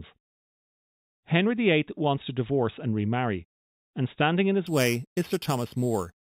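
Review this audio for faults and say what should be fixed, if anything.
From 4.67 s, right after "remarry and standing in", to the end, the speech gains a bright metallic fizz: imaging from sample-and-hold upsampling. Each sample was repeated without smoothing, mirroring the band into roughly 4 kHz to 8 kHz at about −15 dB, which fits an 8 kHz source. Unlike steady hiss, the fizz tracks speech level. Upsample with a proper interpolating low-pass filter instead of sample repetition.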